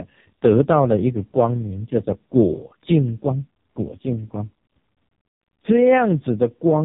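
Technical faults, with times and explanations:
Throughout: AMR narrowband mobile codec. The speech sounds thin, buzzy and heavily synthetic, with nothing above 3.8 kHz, so sibilants and breath lose their edge. The voice has passed through a mobile speech coder that samples at 8 kHz and rebuilds the vocal tract from a handful of pulses in each short subframe. The damage is heavy enough to point to its lowest mode, around 4.75 kbps, where so few bits make the pitch pulses crude and mechanical.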